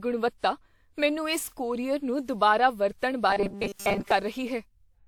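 Across the whole speech recording the sound is swirly, smeared and hollow, with consonant attacks blurred and dulled, more degraded than a single encode at this quality would leave it. That character is generation loss, likely from the audio being passed through a WMA encoder around seven times at a setting that points to 128 kbit/s. Each pass requantised on a shifted frame grid, so noise and spectral gaps piled up. Nothing sits above 20 kHz.

From 3.30 to 4.11 s the speech collapses into a rigid, metallic buzz that roughly tracks the syllables but holds a fixed pitch of 200 Hz. This is robotic sound from repeated short buffers. Fresh audio likely arrived too rarely, so playback kept looping the most recent fragment, whose 200 Hz repetition fits a buffer of about 5 ms, while most of the real audio in that stretch was skipped.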